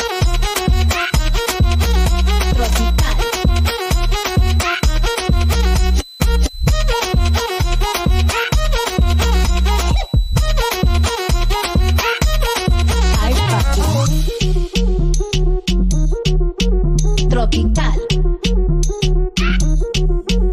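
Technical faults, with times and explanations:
0.00–14.37 s, switching supply whistle: A thin, steady high whistle near 4 kHz sits beneath the audio, roughly 25 dB below it. Its pitch wanders between about 3.88 and 4.04 kHz rather than holding still. The drift comes from a nearby switching power supply cycling in an audible burst mode or beating against another supply, shifting frequency as its load changes, until the whistle stops at 14.37 s.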